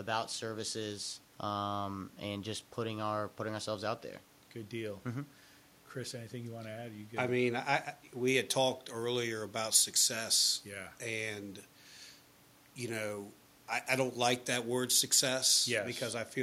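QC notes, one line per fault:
8.28 to 15.79 s, pre-emphasis left on: from 8.28 s the speech turns abruptly thin, bright and hissy, with sibilants spitting forward, and stays that way to 15.79 s. A treble lift matching the FM 75 µs curve was applied but never undone by the corresponding de-emphasis, so 10 kHz sits about 14 dB hotter relative to 1 kHz. On a spectrogram the upper band brightens sharply across that span; the waveform shows spikier, denser fricative bursts. Room noise sits roughly 33 dB below the speech.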